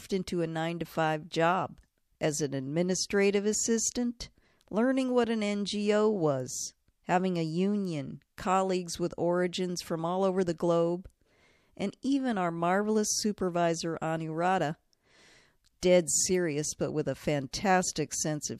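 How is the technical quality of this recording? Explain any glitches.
The recording has a codec fault, pre-echo, heard twice. The first is at 15.80 to 15.83 s, just before "dead serious but with". The second is at 17.51 s, just after "serious but with a". A transform codec spread quantisation noise across each block, so noise sized for a sharp attack leaked into the quiet moment before it. The result is a brief hiss about 15 to 16 dB up, and a softened onset. The roughly 20 ms smear fits long blocks of about 36 ms with no switch to short ones.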